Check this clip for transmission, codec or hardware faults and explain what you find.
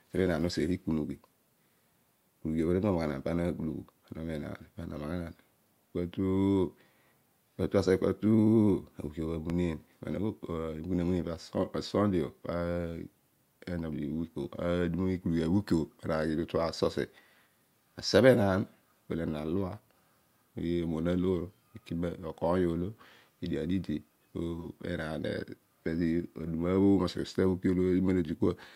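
One hardware fault shows up: a single loud pop in the speech.

Loud pop, 9.50 to 9.53 s: a brief electrical transient, most likely from a plug being moved, a switch, a static discharge or a driver glitch, was added straight onto the signal. The stages after it smoothed the spike into a short, sharp burst lasting a few hundredths of a second. It is heard as one sharp pop, peaking roughly 10 dB above the speech, which keeps going underneath without a break.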